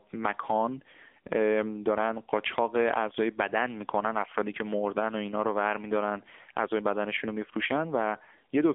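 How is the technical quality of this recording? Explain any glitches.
The recording has passed through an AMR narrowband mobile codec for its whole length, which limits its quality. AMR-NB rebuilds speech from a vocal-tract model excited by a few pulses in each 5 ms, at a bit budget the sound suggests is near 7.95 kbps. The line band runs from about 250 Hz to 3.5 kHz with nothing above 3.6 kHz, so the speech sounds thin and muffled, with a plainly audible buzzy, synthetic edge.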